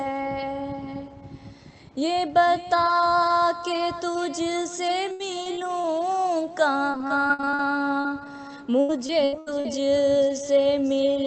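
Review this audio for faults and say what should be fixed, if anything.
There's repeated packet loss, giving that robotic sound, in three stretches: 5.11 to 5.86 s, 6.92 to 7.61 s and 8.80 to 9.66 s. Packets keep going missing, and each hole gets patched by stretching out the last bit of sound before the next one hits. The middle stretch has the most, with about nine quick gaps, none longer than about 50 ms. The last stretch has the longest holes, around 80 ms, and about a third of it is filled-in sound. The result is choppy, with pieces of the audio gone. To prevent it, fix the network path's loss and jitter, or turn on Opus in-band FEC with a slightly deeper jitter buffer.

There's also a short concealed packet loss from 8.01 to 8.06 s, roughly 40 ms of audio that never arrived in time. The receiver covered it by carrying the preceding sound forward, as pitch or as shaped noise, and then blending back into the real signal. 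You hear it as a brief smear or wobble just after the second robotic patch, all on top of the call path's upper limit of 8 kHz, which fits Opus at around 32 kbps. Preventing it comes down to the same fix: cleaner transport plus FEC.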